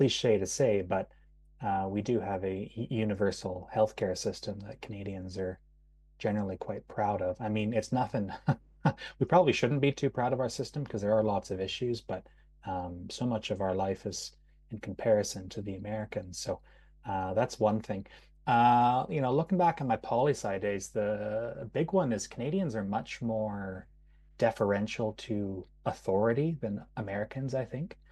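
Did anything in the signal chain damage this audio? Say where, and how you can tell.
Yes. Mains hum enters in the analogue wiring and runs through the whole speech clip as a steady 50 Hz tone, roughly 30 dB under the voice. A spectrogram shows a constant horizontal line at 50 Hz, even in pauses. A ground loop or a nearby transformer is coupling the power line into the signal.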